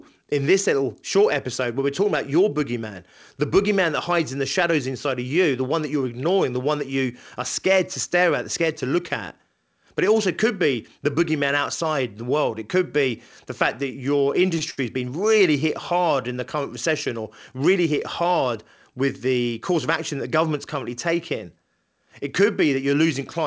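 At 14.58 s the speech holds for a moment, after "the fact that your". It ends at 14.62 s. A second, longer hold runs from 14.70 to 14.79 s, before "has been really hit". Both are short stalls from a late packet. The packet missed its slot and the jitter buffer ran dry. The receiver stretched the last sound, about 19 ms and then 70 ms of fill. Nothing is lost. The sound just hangs briefly, with a slight buzz or dip.

From 16.89 to 17.87 s, after "hard in the current", the talking rushes. This is a jitter buffer speed-up. The buffer had built up too much delay. The receiver trimmed out small pitch-period slices, roughly 70 ms in all. Playback runs at 105% speed. The pitch stays the same, but the phrase sounds hurried until "hit hard with the". The wideband call codec cuts everything above 8 kHz.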